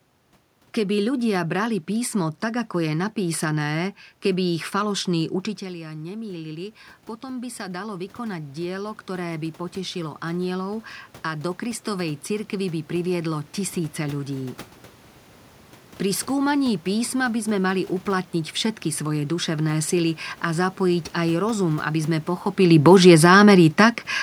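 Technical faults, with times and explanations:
5.59–14.66 s, automatic gain rising: after the voice drops about 12 dB, the gain control slowly climbs about 12 dB, swelling voice and room noise together.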